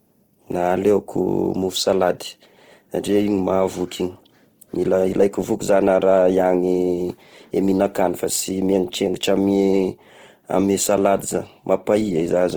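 A speech clip with two faults running through it. The whole recording has Opus compression artefacts, plainly audible. The voice keeps its full bandwidth, reaching about 20.2 kHz, but its tones sound rough, grainy and noisy. Energy is held in every band while fine detail is replaced by folded or noise-like content. That fits the codec's music mode at a low rate, around 16 kbps, which is the likely cause. There are also clock slip clicks from 0.14 s to 12.55 s. Faint, regular ticks come roughly every 0.15 s, around seventy in all. Each is likely a single sample dropped or repeated where two unsynchronised clocks drift apart, at an error of about 150 ppm.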